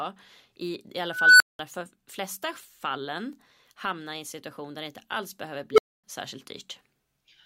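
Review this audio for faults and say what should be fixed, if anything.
Two unstable filter blowups: a squeal around 1.5 kHz swells over 0.32 s at 1.08–1.59 s, then 0.19 s of silence; a roughly 400 Hz one at 5.72–6.04 s builds in 56 ms, then goes silent for 0.26 s. Bad recursive coefficients let the output run away until it clips and overflows. Check that the poles sit inside the unit circle before loading any new coefficients.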